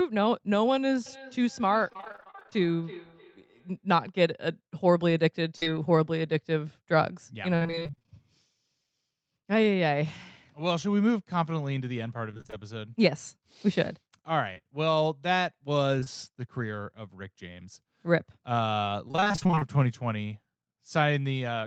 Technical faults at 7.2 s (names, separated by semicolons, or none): repeated packet loss (robotic sound)